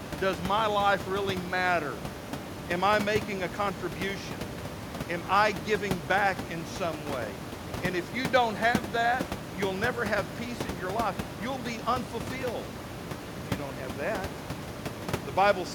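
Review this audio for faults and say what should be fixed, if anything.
Nothing stood out on listening, and the room noise about 11 dB below the speech belongs to the recording space, so there is nothing to fix.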